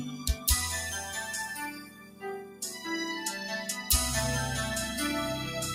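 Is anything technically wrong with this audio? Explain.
Yes. A noise suppressor applied to music or sounds runs throughout. It treats steady, sustained content as noise, so the level swings by roughly 10 dB and the sound pumps and thins.

Sound cut by the noise suppressor occurs from 0.08 to 0.47 s, dipping about 8 dB, and from 1.71 to 2.84 s, dipping about 13 dB. Sustained parts and decays sink audibly there while sharper onsets pass.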